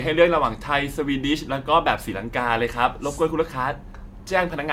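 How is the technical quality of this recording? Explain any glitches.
The recording is compromised by one fault throughout: generation loss. For the whole clip the speech sounds swirly, hollow and smeared, with consonant attacks blurred. The likely cause is about four rounds of lossy encoding, consistent with AAC-LC around 96 kbit/s, each requantising on a shifted frame grid so errors accumulate. A spectrogram shows nothing above 17 kHz. The waveform shows softened transients.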